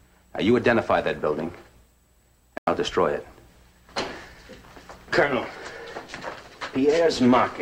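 At 2.58 s the audio drops abruptly into silence and stays there until 2.75 s, a gap of about 0.17 s. This is a corrupt frame muted fault: damaged bits in the compressed stream caused the decoder to reject the affected data, and the player substituted silence rather than decoding garbage. The length of the hole points to two consecutive frames of roughly 85 ms each. Timing is preserved, and the audio resumes exactly where it would have been.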